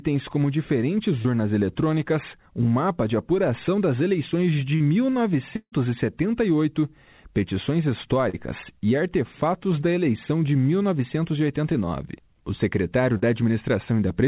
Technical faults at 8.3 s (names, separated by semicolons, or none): short concealed packet loss